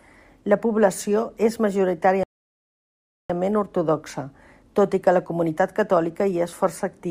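At 2.23 s the speech drops to silence until 3.30 s, then resumes on "ortodoxa tot i que" with nothing missing: a rebuffering stall, where playback starved and waited, adding about 1.06 s.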